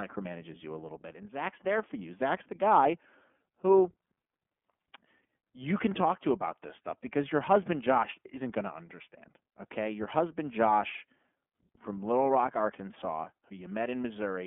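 iLBC codec, throughout: the speech is confined to a 200 Hz to 3.4 kHz line band and coded frame by frame, leaving a plainly rough, synthetic edge consistent with 30 ms frames.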